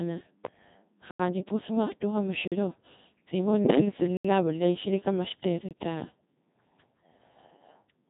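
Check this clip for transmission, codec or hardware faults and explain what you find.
Three faults are present: heavy low-bitrate vocoding throughout, four blocks of digital silence, and a short burst of radio bit errors.

Codec 2 vocoder, whole clip: the speech sounds consistent with Codec 2 at 2.4 kbit/s. The waveform is rebuilt from sine waves using only pitch, voicing, energy and envelope, so it sounds heavily robotic and buzzy.

Blocks of digital silence at 1.11 to 1.20 s (85 ms), 2.48 to 2.52 s (43 ms), 4.17 to 4.25 s (75 ms) and 5.69 to 5.71 s (21 ms): each is an abrupt drop to silence. Three of the lengths fit unfilled output buffers of 4096, 2048 and 1024 samples at 48 kHz.

Bit errors on digital voice radio, 3.65 to 3.80 s: a high error rate, around one bit in ten, corrupts the frame parameters. The voice jumps in pitch, level and tone and collapses into warbling gibberish.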